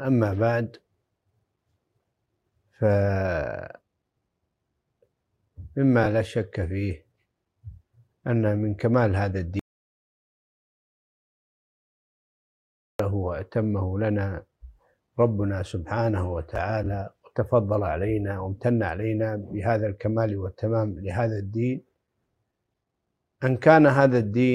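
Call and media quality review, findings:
Audio dropout to silence, 9.59 to 13.0 s. Signal cuts off mid-flow, returns abruptly. Gap is silent, no room tone. About 3.4 s of content lost. Likely input loss upstream, such as a disconnected device, failed link or stray mute, with the recorder writing silence.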